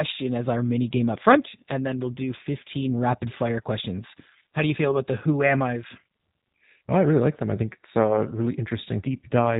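From start to finish the speech carries plainly audible G.729 codec damage: a thin, slightly rough, synthetic quality, consistent with an 8 kbit/s G.729A-type codec rebuilding each 10 ms frame from a filter, pitch predictor and sparse pulses. A spectrogram shows a hard ceiling at 4 kHz, with nothing above it.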